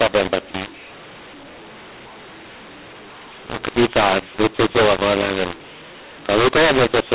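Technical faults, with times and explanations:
Throughout: mu-law and A-law mixed up. Speech coded with A-law is decoded as mu-law, so every level is mapped wrongly, some too loud, some too soft. Unlike clipping, the harshness reaches quiet passages too, and pauses fill with noise as near-silent samples are lifted.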